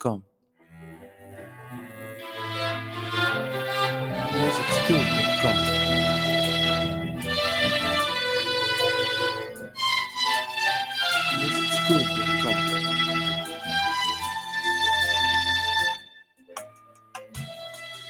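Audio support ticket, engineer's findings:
Noise suppressor applied to music or sounds, present for the whole clip. Level swings of around 10 dB on held material. Onsets pass, sustains and tails sink, so the sound pumps and thins. Probable component: a speech-tuned noise suppressor left in the chain. It treats steady tones and ambience as noise. Fix: bypass it for non-speech content.

Sound cut by the noise suppressor at 0.21–0.79 s (deepest drop about 20 dB), 0.96–1.6 s (about 9 dB), 7.08–7.26 s (about 5 dB), 9.44–9.79 s (about 16 dB), 13.42–13.71 s (about 8 dB), and 15.96 s to the end (about 20 dB). The same suppressor classed these passages as noise and attenuated them. The worst cuts are at the start and the tail.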